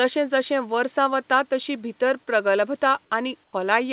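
Comfort noise in place of the background, 3.44 to 3.53 s: for 90 ms the real room background drops out and a flat, featureless hiss about 22 dB quieter takes its place. The likely cause is that the sender stopped transmitting during the pause and the receiver filled the gap with synthetic noise.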